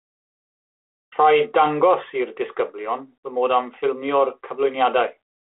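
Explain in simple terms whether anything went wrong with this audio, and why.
Nothing went wrong here: the speech travels over a G.726 ADPCM telephone link that is working as intended, which gives it the narrow, phone-like sound of a line passing only about 300 Hz to 3.5 kHz, along with a light coding roughness that comes from that link itself.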